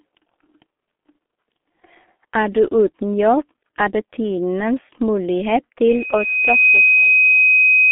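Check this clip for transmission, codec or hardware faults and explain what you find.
Two faults are present. Throughout, the G.723.1 codec's 30 ms frames and slow voice model leave the speech muffled and hoarse, with smeared consonants, band-limited to 250 Hz to 3.5 kHz, at about 6.3 kbit/s. From 5.87 s to the end, a loudspeaker feedback squeal appears: the microphone re-amplifies its own loudspeaker, and a 2.5 kHz tone swells over about a second until it sits about 5 dB above the speech.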